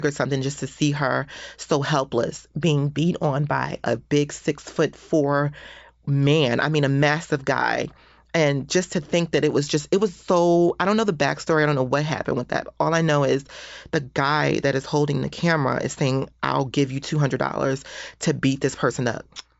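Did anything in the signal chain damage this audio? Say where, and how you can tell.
No, nothing stood out on listening that would point to damage at any stage of the chain.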